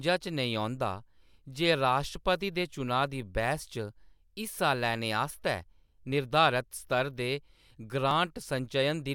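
Overlap between stream segments at 2.15, 6.12 and 8.11 s: two segment timestamps claimed the same moment, so the player discarded sound that was never duplicated. About 11, 8 and 6 ms of speech vanish, and each splice is heard as a tiny skip, spaced in a way that fits 2-second segments.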